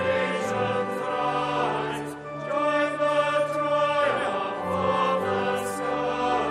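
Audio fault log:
No faults detected in this clip.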